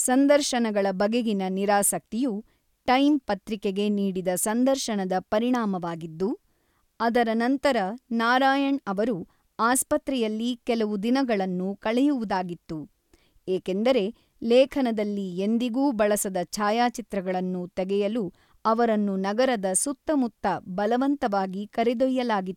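No technical faults can be heard anywhere in the recording.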